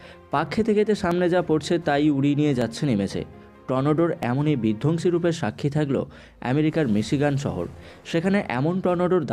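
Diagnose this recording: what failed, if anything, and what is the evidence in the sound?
Four isolated clicks sit at 1.11, 2.62, 4.23 and 8.11 seconds. Each is a single sharp tick with no gap in the sound around it. On a spectrogram each shows as a thin vertical line. This is the signature of dropped samples, most likely at the driver or buffer stage. Well under a millisecond of audio goes missing each time. The waveform jumps straight to a later value, and that step is the click.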